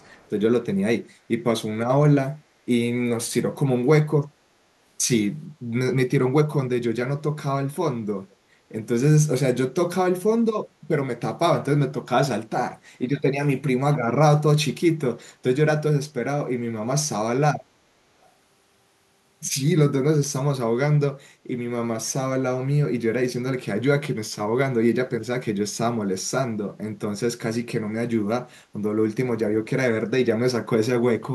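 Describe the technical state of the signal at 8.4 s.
Around 8.4 s the signal carries a brief echo leak, running from 8.31 to 8.36 s, just before the moment asked about. A faint, delayed copy of the speech surfaces about 460 ms after the original, very quiet and far below the direct voice. The likely cause is a loudspeaker on the far end whose echo canceller let part of the returned speech through. Unlike room reverberation, which trails smoothly from the source, this is a detached repeat arriving almost half a second late.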